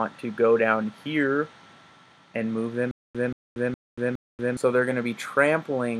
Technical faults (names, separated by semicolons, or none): stutter with silent gaps